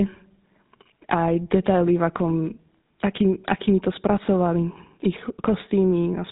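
From start to finish, the speech has been squeezed through the GSM full-rate codec, which rebuilds the voice from a vocal-tract model excited by a sparse, regularly spaced pulse train rather than from the original waveform. The damage is plainly audible as a buzzy, gravelly roughness, consistent with a bitrate around 13 kbps. The codec also discards the top of the spectrum, leaving nothing above 3.8 kHz, so the sound is dull and narrow-band throughout.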